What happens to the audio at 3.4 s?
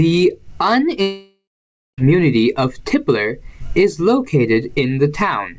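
Nothing goes wrong at 3.4 s: the speech there carries on intact, with no dropout, click or glitch, only the steady band limit of the call path, which has no content above 8 kHz and fits a G.722 wideband codec.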